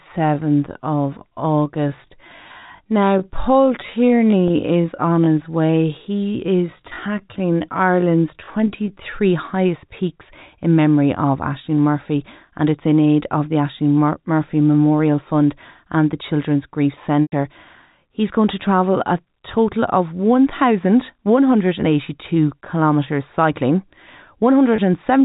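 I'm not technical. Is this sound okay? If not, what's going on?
No, there are two problems.

From the start until 9.14 s, just before "highest peaks in memory", the audio runs at about 0.69 times normal speed while the pitch stays the same. This is likely a time-stretched section: software lengthened the audio to fill a set duration by repeating tiny slices of it. That is why this stretch sounds drawn out, and why the pace jumps back to normal when it ends.

There are also three moments of packet loss with pitch repetition. At these points, pieces of the transmission went missing and the receiver filled each gap by repeating the last bit of sound. Two gaps are brief, at 4.48 to 4.50 s and 24.76 to 24.78 s, and each sounds like a slightly held, buzzy note. The gap from 17.23 to 17.32 s is longer, about 100 ms, which points to a run of lost packets. There the repeated sound fades toward silence before the audio returns.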